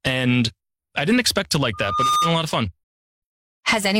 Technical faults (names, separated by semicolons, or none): loudspeaker feedback squeal; digital broadcast dropout